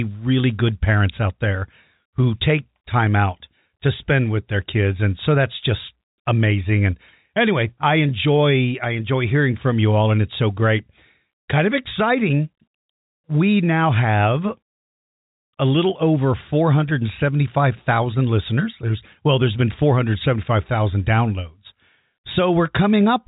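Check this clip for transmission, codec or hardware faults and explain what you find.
No faults found.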